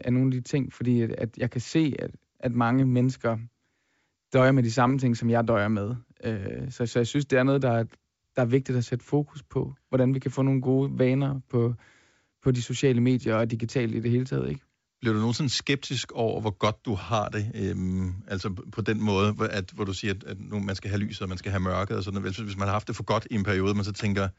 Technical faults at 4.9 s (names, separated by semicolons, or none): bit errors on an ADPCM link